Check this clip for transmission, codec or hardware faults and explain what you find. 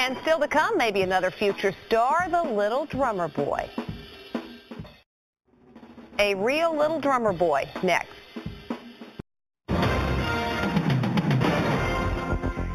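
One fault runs through the whole clip: imaging from linear upsampling. The rate was raised by straight-line interpolation between samples, which fits an 8 kHz source brought up to 44.1 kHz. That weak filtering dulls the top of the band and leaves a mirrored copy between 4 and 8 kHz, roughly 25 dB down, heard as a faint metallic shimmer on sibilant and bright sounds.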